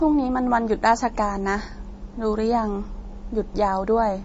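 Speech clip with MP3 compression throughout: nothing above roughly 7.6 kHz, and watery, swirly artefacts plainly audible, likely from a low bitrate around 32 kbps starving the encoder.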